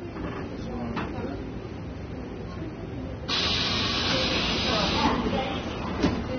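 From start to finish the audio carries plainly audible AAC compression damage, most likely from AAC-LC coding at a low rate, which fits something near 24 kbps. Nothing survives above 6.3 kHz, so the sound is dull, and what remains is smeared, with a warbling, fizzy texture on sustained sound. That texture separates it from a simple low-pass filter, which would also dull the top but leave the remaining spectrum clean and steady.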